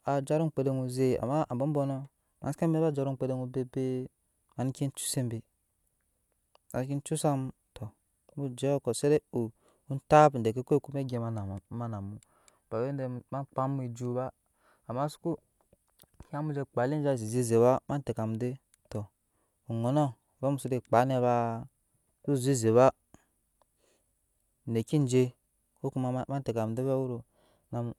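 Nothing technical goes wrong anywhere in this recording, so there's simply no fault to point to at any moment along the way.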